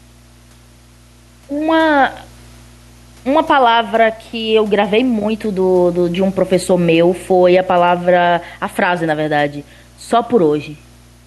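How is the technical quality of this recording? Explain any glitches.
Two faults run through the whole speech recording. Room noise sits about 39 dB below the speech.

Mains hum is present throughout. A steady 60 Hz tone, about 25 dB below the speech, leaks in from a ground loop or nearby transformer.

Gain pumping also runs throughout. The gain ducks by around 5 dB under loud syllables, likely from excessive input gain feeding a fast limiter.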